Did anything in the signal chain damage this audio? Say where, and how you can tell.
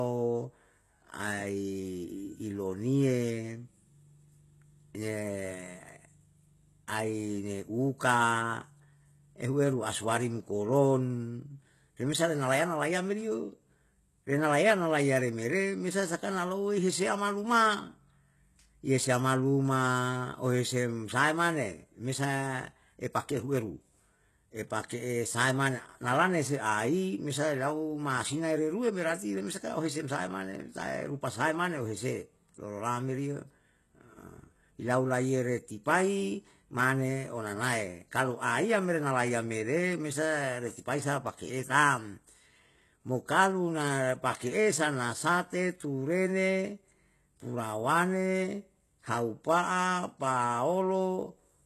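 Yes. The damage sits at the codec stage and runs through the whole speech clip. The treble sounds synthetic. Sibilants come out gritty and lispy, and nothing reaches above about 12.3 kHz. That pattern points to HE-AAC compression, likely at a very low bitrate near 16 kbps. The codec keeps only the lower band and rebuilds the top by copying it upward. The copied harmonics don't line up with the real ones, and the damage is heavy.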